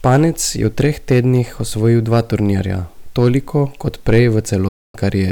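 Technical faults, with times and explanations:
Throughout, hard clipping: the loudest peaks carry a brief crackle and a harsh edge. The level was driven about 6 dB past what one stage could pass, so around one percent of samples were flattened, adding high harmonics above the peaks.
4.68 to 4.95 s, digital broadcast dropout: right after "turnirja toliko kot prej" the sound fades out within 8 ms and stays silent for about a quarter second. That fits a receiver muting through a run of about eight lost frames, so the audio sent during that gap is gone.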